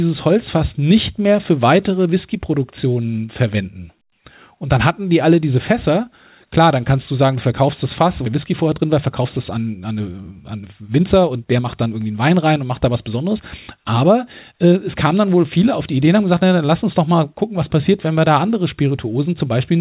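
At 8.26 to 8.28 s the speech jumps abruptly forward with no gap. This is a skip ahead: roughly 0.7 s of audio was dropped and the two sides spliced together. From 8.5 to 12.22 s the speech sounds hurried at an unchanged pitch, running about 9% fast. This is a jitter buffer speed-up, where the receiver trimmed short pitch-period pieces, around 0.4 s in total, to work off excess delay. All of this sits within the narrowband sound of the G.711 A-law call path, which has nothing above 4 kHz.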